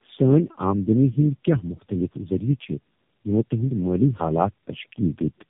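From start to finish the speech has tandem speech coding. It sounds like three low-rate speech coders in a row, which fits G.729A twice and then AMR-NB, each one re-encoding the last one's damage. Nothing gets through above 3.7 kHz, so it's muffled, rough and warbly throughout.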